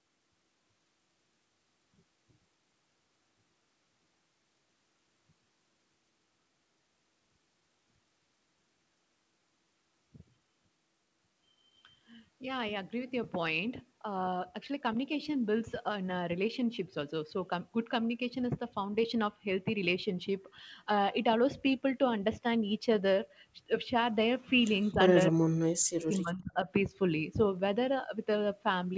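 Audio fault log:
24.93–24.98 s and 25.32–26.67 s, speech suppressed in double talk: The speech first dips briefly by about 5 dB, then drops by about 40 dB for around a second. The likely cause is an echo canceller mistaking overlapping talk for loudspeaker echo and attenuating it.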